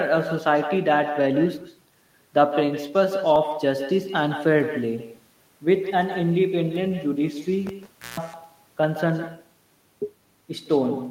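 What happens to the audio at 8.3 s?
Audio missing between chunks at 8.34 s: a short skip where a sliver of sound, roughly 20 ms, vanishes and the audio on either side is butted together with no silence. This is likely a recorder or processor handling the audio in 5-second chunks and dropping a moment while it closes one block and opens the next. The result is an abrupt jump that clips the sound in progress rather than a pause.

Echo with no canceller runs through this moment as well as the rest of the clip. The speech is trailed, around 150 ms later, by a copy about 11 dB quieter. That copy sounds thinner, as if a far-end loudspeaker were feeding the voice back into an open microphone with nothing removing it.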